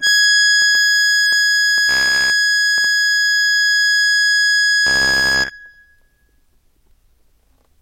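From 0.07 to 2.85 s a train of clicks runs over the music, about 3.2 per second at an uneven pace, roughly ten in all, with peaks about as loud as the music itself. Each click has much the same sharp shape. This sets them apart from random crackle, and they tick through quiet moments as well as loud ones. Interference from nearby equipment or a faulty connection or power supply is the likely source.

Overlapping the end of that stretch, from 1.89 to 2.31 s, and again from 4.87 to 5.50 s, the music turns into a rigid metallic buzz at 66.7 Hz. This is robotic sound from repeated short buffers. New audio arrives too seldom, so a 15 ms slice keeps being replayed while most of the real material is skipped. The likely cause is a starved audio buffer. Unlike a steady mains hum, the buzz still loosely follows the music's shape.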